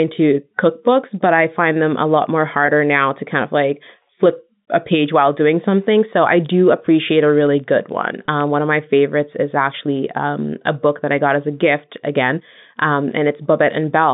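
Telephone-band speech, carried over what sounds like G.711 coding limited to roughly 150 Hz to 3.7 kHz, with two technical faults. Packet loss with pitch repetition appears at 2.66–2.68 s, just after "them a lot more", and again at 8.26–8.28 s. Each gap lasts about 20 ms and was bridged by repeating the last pitch period, so it sounds like a brief, slightly held buzzy note. It does not sound like a click or a silent dropout. From 7.38 to 8.48 s, between "I do appreciate a" and "one of my favorites", a filter restarted on every block adds a steady ticking buzz at 23.4 Hz, which fits a 2048-sample block. Each block starts from silence and begins with a small transient. Because these ticks repeat at a fixed rate and rise and fall with the speech level, they differ from the isolated, irregular glitches of packet loss.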